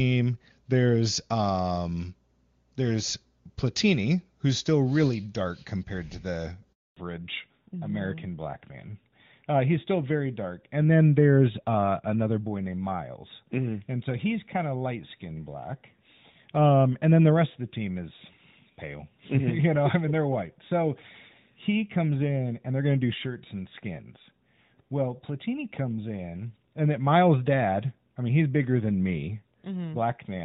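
At 6.73 s a handover gap opens. The call jumped networks and no speech frames arrived for 240 ms, so the sound fades out within a few tens of milliseconds and stays silent until 6.97 s. The waveform shows a flat line, and the spectrogram shows a blank vertical band across all frequencies.

From 6.97 s to the end, the call falls back to narrowband. It moved from a high-rate HD Voice stream (consistent with AMR-WB at 23.85 kbit/s) to an older codec (consistent with AMR-NB at 12.2 kbit/s). Nothing above 4 kHz survives, so the sound turns duller and rougher. On a spectrogram the energy stops at a hard ceiling at 4 kHz, where it had reached past 6 kHz before.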